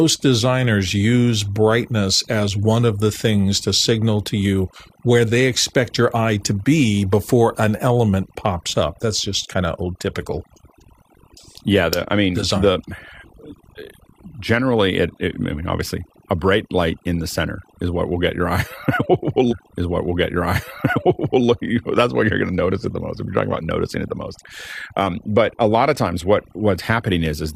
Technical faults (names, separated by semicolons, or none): overdone noise removal; stream segment repeated